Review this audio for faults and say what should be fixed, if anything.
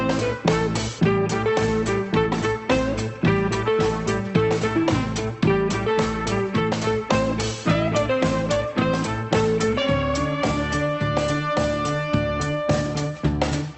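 Nothing here needs fixing; the audio comes through the call path just as you'd expect, with the ordinary narrowed top end of a call codec and nothing going wrong along the way.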